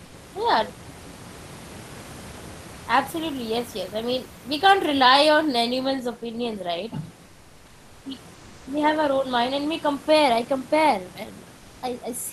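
Comfort noise in place of the background appears at 0.05 to 0.13 s, 7.25 to 8.05 s, 8.34 to 8.66 s and 11.57 to 11.82 s. The room hiss in these pauses turns flat and textureless, about 1 to 4 dB quieter. Likely cause: discontinuous transmission in Opus.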